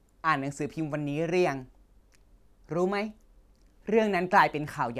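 No technical faults can be heard anywhere in the recording. Nothing in the speech calls for a time mark or further comment.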